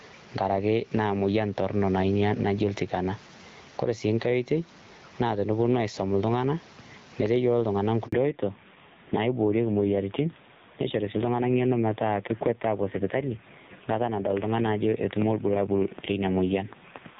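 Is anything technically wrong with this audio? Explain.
Yes, there are three faults.

Gain pumping runs through the whole clip, with the gain swinging by around 10 dB. Loud and quiet syllables sit unnaturally close in level, so the speech sounds squashed. The likely cause is microphone gain set far too high, with a fast limiter or compressor clamping down on each loud sound and releasing in the gaps.

A handover gap runs from 8.07 to 8.12 s. The speech fades out within a few tens of milliseconds and leaves about 60 ms of silence before the sound resumes. This is the dropout heard when a call is moved from one network link to another: no speech frames arrive during the switch, so whatever was said in that moment is simply missing.

A fallback to narrowband begins right after the gap, at 8.12 s, and lasts to the end. Before the gap the speech has the airy top end of HD Voice, consistent with AMR-WB at about 12.65 kbit/s. 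Afterwards nothing above 4 kHz remains. The speech turns dull, boxy and somewhat rough, which fits the new link carrying the call on the older AMR narrowband codec at a low rate, around 5.9 kbit/s.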